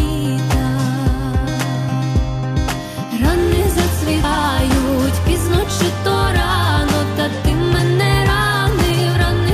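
Compressed frames were skipped at 4.23 s, 7.78 s and 8.90 s. Whole blocks of encoded audio never reached the output, so the sound jumps forward by about 150 ms, then about 300 ms, then about 150 ms again. Those amounts fit several frames of roughly 23 ms each. Unlike a dropout, no silent gap appears; the audio simply jumps ahead at each join.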